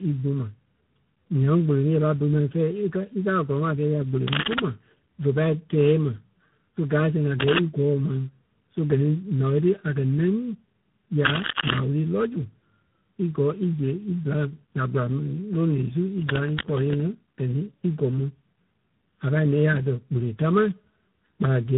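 From start to finish the speech sounds hollow and phasey, with fixed notches beginning around 700 Hz and repeating up the spectrum. This is channel delay (comb filtering): one channel runs less than a millisecond behind the other, and summing them to mono cancels evenly spaced frequencies.

Throughout, the voice is also rough, muffled and warbly, with nothing above 3.8 kHz. This points to tandem speech coding, with two speech codecs in a row, an AMR-NB-style coder followed by G.726. Each re-encodes the previous codec's degraded output, so the artefacts build on one another.

Bursts of scratching, rustling noise sit about 5 dB above the speech from 4.28 to 4.60 s, from 7.38 to 7.59 s, and from 11.22 to 11.80 s, ending just before "wúru lɔ́". A longer, quieter burst about 5 dB below the speech runs from 16.12 to 16.99 s. This is cable scratch noise, likely from a worn cable or connector whose contact resistance jumps around as it moves.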